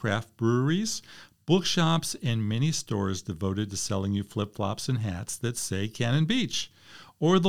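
Speech recording whose signal shows no technical faults at any point.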